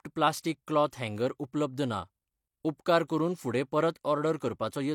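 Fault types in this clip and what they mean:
Pre-echo: a transform codec smears quantisation noise across its whole block, so a short hiss leads sharp speech onsets, lasting 15 to 36 ms, before "क्लॉथ हँगर उपलब्ध ना" and "करून फुडें". Unlike reverberation, the smear comes before the attack, not after.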